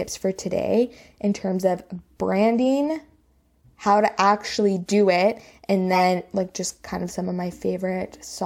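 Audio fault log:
5.93–6.03 s, corrupt frame decoded: after "actually do it and", a loud squeaky burst cuts in. Flipped bits in roughly two frames put energy at wrong frequencies.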